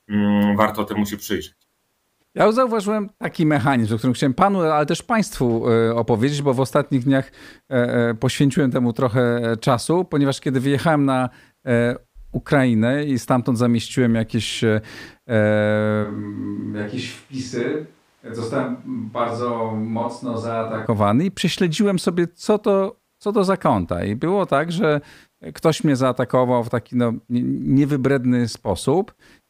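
From 16.06 to 20.85 s the speech abruptly turns roomy and hollow, with thinner bass, a level drop of roughly 5 dB and more audible room noise. It sets in just before "i prześledziłem sobie co", likely a switch to a distant microphone.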